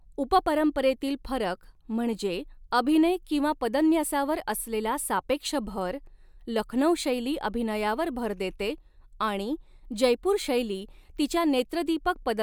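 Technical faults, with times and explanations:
No technical faults can be heard in this recording.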